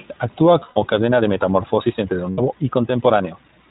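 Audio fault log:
throughout: iLBC codec, audibly rough and synthetic speech with nothing above 4 kHz; the spectrogram shows a hard ceiling there, consistent with the 15.2 kbps mode in 20 ms frames.
0.60 to 0.78 s and 2.30 to 2.40 s: lost iLBC frames, 140 ms then 80 ms of missing audio filled by repeated pitch cycles with noise, heard as a held buzzy vowel; the waveform shows repeating periodic stretches, and speech recovers almost at once afterwards.
1.01 s to end: time-stretched section, the pace abruptly quickens to about 1.35 times while pitch holds, sounding rushed, likely from software dropping short pieces; spectrogram harmonics keep their spacing while syllables crowd closer.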